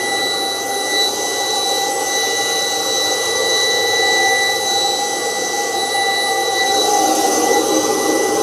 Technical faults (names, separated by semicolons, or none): none